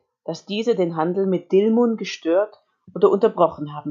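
Automatic gain rising runs from 0.24 s to 2.54 s. The automatic gain control judged the incoming speech too quiet and kept turning its gain up over those 2.3 seconds, adding about 5 dB in total. Because the boost is applied to the whole signal, the voice and the background noise swell together, so the noise floor creeps upward along with the talker instead of staying steady beneath them.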